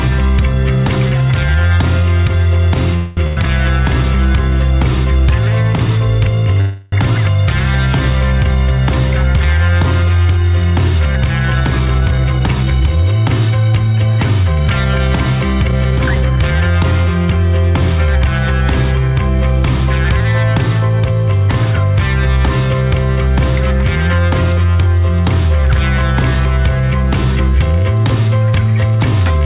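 Audio carried over a narrowband call path, with nothing above 4 kHz, which fits a G.711 codec. Call audio freezes at 2.96–3.19 s and 6.60–6.94 s, likely from delayed packets draining the jitter buffer, stretch the last sound into a fading buzz or hiss. On a spectrogram these appear as smeared horizontal bands before the audio resumes intact. A burst of packet loss at 3.27–3.39 s replaces about 100 ms of audio with a fading held buzz or hiss, so the waveform tapers and then jumps ahead. Jitter buffer speed-ups at 11.55–13.12 s and 15.68–16.76 s run the audio at 118% speed with unchanged pitch, trimming roughly a third and a fifth of a second. The spectrogram shows compressed events with harmonics unshifted.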